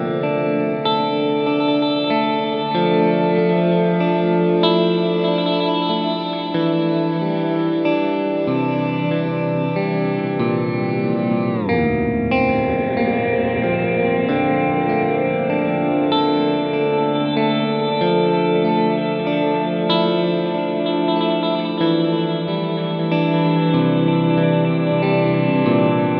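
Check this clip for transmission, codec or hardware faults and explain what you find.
No transmission, codec or hardware faults are audible anywhere in the clip.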